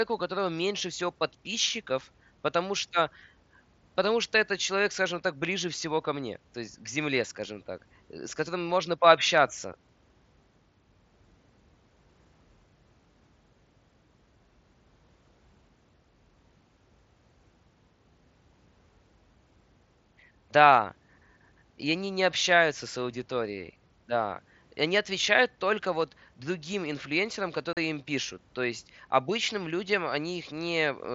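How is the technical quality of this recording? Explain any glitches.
One glitch stands out, near the end of the speech. The link behind it sounds like a wideband Bluetooth headset using mSBC, with the audio reaching up to 8 kHz.

At 27.73 to 27.77 s there is unconcealed Bluetooth headset packet loss. For 37.5 ms, voice packets between headset and phone never arrived and nothing was patched in, which fits five lost 7.5 ms mSBC frames. It is heard as a short, hard dropout. On a waveform the speech drops out abruptly and snaps back. A spectrogram shows a sharp vertical break across every frequency.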